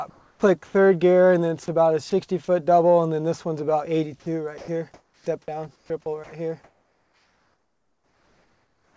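Comfort noise in place of the background runs from 0.10 to 0.74 s, covering about 0.4 s. The real ambience gives way to a steady, featureless hiss, likely because the sender's voice detector heard nothing and stopped transmitting, leaving the receiver to synthesise filler noise.

An onset clipped by the voice detector falls at 0.39 to 0.42 s. The sound begins abruptly, missing its first 30 ms of soft attack, likely because the detector reacted late and synthetic noise filled the gap.

Sound chopped by the voice detector appears from 1.66 to 2.12 s, where brief pieces totalling 40 ms drop out. It returns more heavily from 4.20 s to the end, where about 3 s of the material is replaced. The audio turns choppy, likely because the detector kept switching transmission on and off. Throughout, the audio has no content above 8 kHz, which fits a 64 kbps G.722 call codec.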